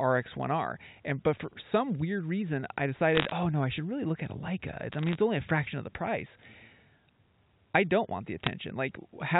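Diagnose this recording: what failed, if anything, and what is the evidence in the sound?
Bit errors on a digital phone line produce short bursts of sharp ticking crackle at 3.15–3.32 s (after "some weird reason I"), 4.92–5.15 s (before "only a fraction of") and 8.44–8.49 s (after "I don't want the"), at an error rate near 0.3 percent. Each flipped bit corrupts one logarithmic sample, and sign or high-order hits jump audibly.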